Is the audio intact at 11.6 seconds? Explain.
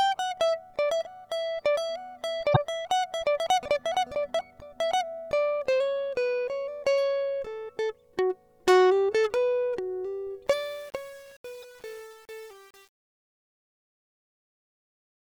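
No. At 11.6 s two faults overlap. The first is damaged data in a compressed stream, from 11.59 to 11.64 s. A short run of the coded stream is corrupt, so the decoder misreads or rejects those frames, loses sync and hunts for the next valid frame header. The result is a brief blip of about 56 ms in the music.

The second is truncation distortion on a fade, running from 10.47 s to the end at 15.28 s. The fade-out starts around 10.5 s and reaches its end at 15.28 s. However, the gain stage applying it rounds the signal to too few levels with no dither, which fits a path keeping only about 7 bits. As the level falls, the waveform collapses into coarse steps, so the tail of the music turns gritty.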